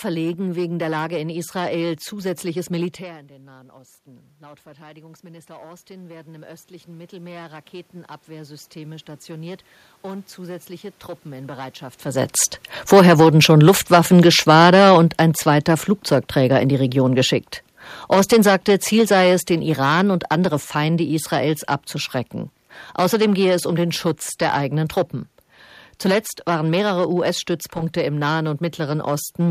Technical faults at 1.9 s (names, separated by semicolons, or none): hard clipping